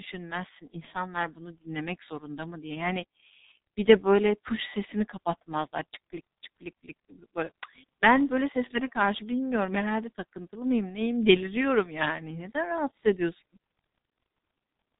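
From start to finish the speech carries the signature of the G.723.1 codec, and the damage is heavy. Nothing survives above about 3.8 kHz, so the top end is simply absent and the voice sounds muffled. The coding rate fits roughly 6.3 kbit/s, with the signal rebuilt from a coarse model refreshed only once per 30 ms frame. That slow update smears fast transitions, leaving consonants blurred and the voice with a hoarse edge.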